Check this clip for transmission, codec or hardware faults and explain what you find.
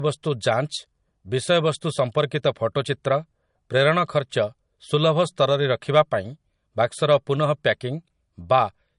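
One codec fault runs through the whole speech recording: low-bitrate audio saved at a high bitrate. Nothing is present above 10.6 kHz from start to finish, and the speech carries the smeared, swirly texture of heavy MP3 compression. The likely cause is a file first encoded at a low MP3 bitrate, around 40 kbit/s judging by the damage, then re-encoded at a much higher one. The second pass cannot restore the stripped detail. Unlike a plain gentle low-pass, the band below the cut-off still carries coding artefacts.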